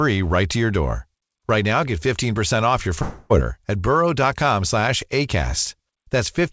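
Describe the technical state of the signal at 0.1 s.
At 0.1 s the signal is intact, with the speech carried cleanly through the WebRTC call path, whose G.722 coding leaves nothing above 8 kHz.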